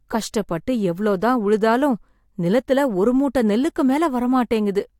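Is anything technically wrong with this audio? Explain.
No, nothing is technically wrong with this audio.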